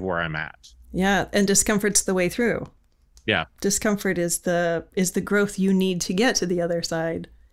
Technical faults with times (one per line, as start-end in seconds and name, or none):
none